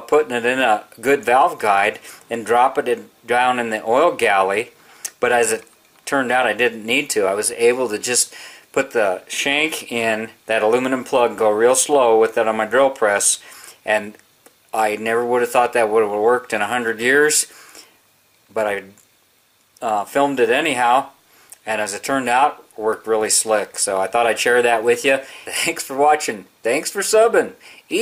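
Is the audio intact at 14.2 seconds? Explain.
Yes, the audio at 14.2 s is intact, with no dropout, click, distortion or other fault at that point.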